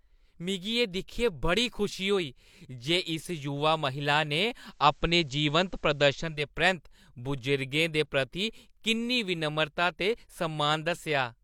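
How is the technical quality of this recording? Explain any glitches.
The recording has one glitch: digital radio blending to analogue. From 4.58 to 6.49 s, just after "महिला ने", the receiver loses the digital stream. It cross-fades over 313 ms to the station's FM broadcast, then returns. Faint hiss, roughly 40 dB below the speech, comes up. The level shifts by about 3 dB.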